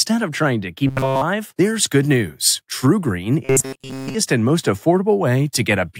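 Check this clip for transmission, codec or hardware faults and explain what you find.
Two stretches of robotic sound from repeated short buffers, at 0.87–1.22 s and 3.45–4.14 s. Both have a fixed 133 Hz metallic buzz, nearly continuous in the first and about two-thirds of the second. The likely cause is roughly 7.5 ms of audio looping while late data is skipped. A fixed-rate buzz that follows the voice only roughly sets it apart from codec warble.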